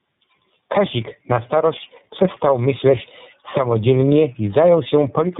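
Tandem speech coding runs throughout: the speech was decoded and re-encoded twice, fitting an AMR-NB then iLBC chain. It sounds rough, warbly and muffled, with nothing above 3.8 kHz.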